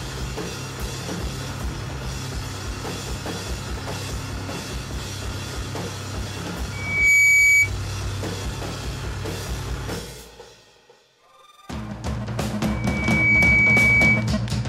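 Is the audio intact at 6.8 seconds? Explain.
No. At 6.8 seconds a loudspeaker feedback squeal is sounding, from 6.72 to 7.70 s. A microphone is hearing its own loudspeaker, and the loop runs away at 2.3 kHz. That tone swells over a fraction of a second into a piercing squeal well above the sound.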